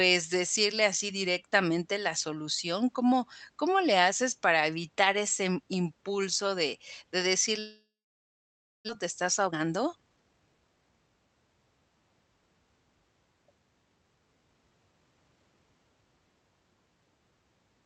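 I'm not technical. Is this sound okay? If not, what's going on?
No. From 7.59 to 8.91 s there is a long network dropout, likely from the connection stalling. The sound smears into a fading buzz, then goes silent for nearly a second, and about one second of the speech is simply gone. That is much longer than a quick click or stutter.

Right after, from 9.05 to 10.77 s, comes a jitter buffer speed-up. The system catches up on the delay by trimming tiny slices, about a third of a second in total, so the speech runs roughly 14% faster. The pitch stays normal, so it sounds hurried rather than squeaky.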